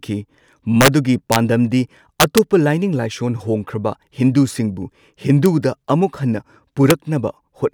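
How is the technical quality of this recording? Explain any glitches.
The recording is marred by integer overflow on its loudest speech peaks, at 0.81 to 0.88 s, 1.32 to 1.36 s, 2.20 to 2.38 s, 5.46 s and 6.90 s. Where the level goes past the integer maximum, by about 2 to 5 dB and barely at all at 5.46 s, samples wrap to the opposite sign instead of limiting. Each event is a crack, harsher than clipping. In the waveform, peaks jump abruptly to the opposite sign. On a spectrogram, each shows as a bright broadband vertical streak.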